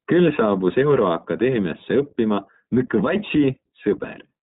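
A speech recording carries the iLBC codec throughout: the band stops dead at about 3.8 kHz and the speech has a plainly audible rough, slightly synthetic grain. A simple narrowband filter would dull the top end without that grain. Each short block's excitation is coded on its own, and the texture fits 20 ms frames at around 15.2 kbps.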